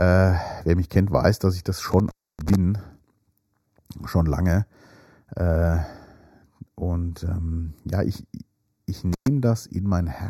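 Throughout the speech runs a channel delay with comb filtering: one side of the original pair arrived roughly a sixth of a millisecond late, and folding the two into mono cancelled shared content at evenly spaced frequencies, the first notch near 3 kHz. The result is a fixed hollow, phasey colour in the upper range. Unlike room reflections or a plain EQ dip, the notches stay put and repeat up the spectrum.

At 1.92 to 2.55 s an intermittent contact breaks the line. A loose cable or plug opened for about 0.28 s within that stretch, so the sound drops out with crackle at the edges. It happens again at 9.13 to 9.28 s, with an open gap of about 0.11 s. What separates this from a codec or network dropout is the electrical crackle at the break edges, rather than clean digital silence or smeared concealment.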